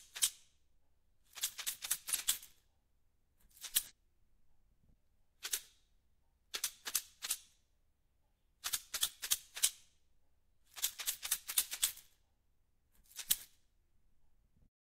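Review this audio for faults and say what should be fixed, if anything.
Compressed frames skipped at 2.09 to 2.19 s: whole coded frames were missing or rejected as damaged, so the sound jumps ahead about 150 ms. Check file integrity and re-encode from an intact source so every frame decodes.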